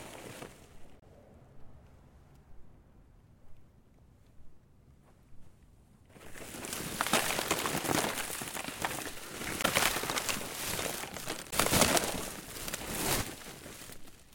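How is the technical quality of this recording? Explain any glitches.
The recording has three short glitches of the same kind: damaged data in a compressed stream, at 0.98 to 1.03 s, 9.61 to 9.65 s and 11.49 to 11.54 s, each about 40 to 50 ms long. Where the stored bytes are corrupted, the decoder misreads those frames and loses sync until it finds the next valid header, producing a brief chirp or squawk.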